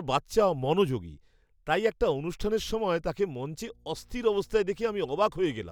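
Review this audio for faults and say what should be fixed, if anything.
Mains hum enters the speech at 3.67 s and runs to the end of the clip. It is a steady low tone at 60 Hz, sitting roughly 30 dB below the speech. The power line is coupling into the signal path, through a ground loop or a transformer near the cabling or gear. The tone appears partway through, so something in the chain changed at that moment. To prevent it, keep audio cables away from power supplies and break any ground loop with balanced connections or an isolation transformer.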